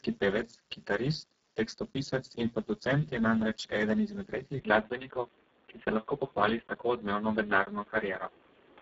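From the start, the speech sounds hoarse and grainy, with a buzzy, almost robotic edge on voiced sounds, and nothing is left above about 7.8 kHz. This is heavy Speex codec damage: the coder gets so few bits for the excitation signal that it rebuilds the voice from a crude pulse-and-noise source. The damage is severe enough to suggest a very low bitrate setting, around 6 kbps.

At 4.60 s, right after "je namreč eden izmed", the sound abruptly turns dull and boxy, with no gap at the change. Everything above about 3.8 kHz is gone, and a faint new background noise appears well below the voice, roughly 35 dB down, while loudness stays about the same. The likely cause is that the input switched to a poorer device, such as a headset in call mode with a narrower band and its own noise floor. The narrowed sound continues to the end of the clip.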